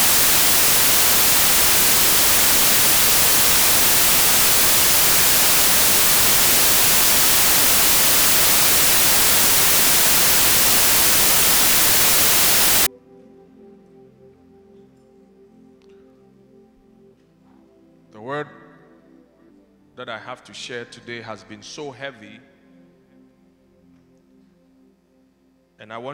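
From 0.0 to 12.87 s, samples built from the wrong bytes: misassembled bytes push low-order bits into each value's top, producing loud, harsh noise, close to white on loud sounds.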